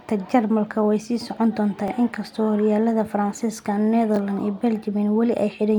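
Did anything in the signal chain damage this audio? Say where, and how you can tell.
Yes, a repeated buffer at the driver stage: at 1.88–1.90 and 4.16–4.18 s, a 20 ms speech slice replays once, clicking; waveforms show duplicated cycles, spectrograms vertical lines.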